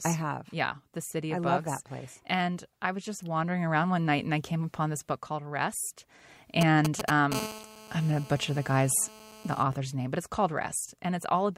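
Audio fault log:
6.61–7.34 s, GSM signalling bursts: a galloping dit-dit-dit run of brief raspy buzzes, roughly as loud as the speech. This fits a nearby 2G phone signalling before a call or text, sending short groups of radio pulses at 216.7 Hz that the audio circuit rectifies into audible buzzes.
7.35–9.63 s, GSM phone buzz: a hard, steady, harmonic-rich rasp at 216.7 Hz, about 14 dB below the speech and unrelated to it. The steadiness points to the phone now in a call, transmitting continuously in bursts that the circuitry demodulates as a constant buzz.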